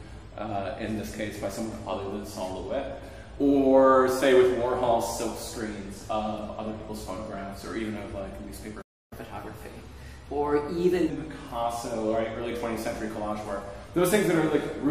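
The player likely ran out of data or had its thread blocked at 8.81 s, a playback stall: the sound stops mid-flow and stays silent for about 0.3 s until 9.13 s. To win back the lost time, the player then resamples its backlog as catch-up at higher speed, from 9.13 s to 11.10 s, running at 1.15 times normal speed, which lifts the pitch by roughly two semitones before it drops back to normal.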